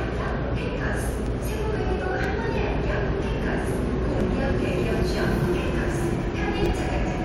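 From 0.28 s to 7.15 s, periodic USB or driver dropouts skip roughly 10 ms every 0.49 s, giving evenly spaced ticks whose steady rhythm rules out random network loss.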